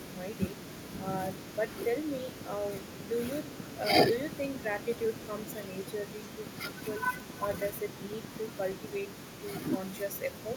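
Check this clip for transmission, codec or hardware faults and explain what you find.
A train of clicks runs through the speech from 2.17 s to 8.96 s. The clicks are evenly spaced at 8.4 per second, about fifty in all. Each has much the same sharp shape. They peak a few decibels above the speech. The likely cause is interference from nearby equipment or a faulty connection or power supply, injecting a short pulse at a steady rate. It sounds like a regular ticking laid over the voice. It carries on through the pauses too.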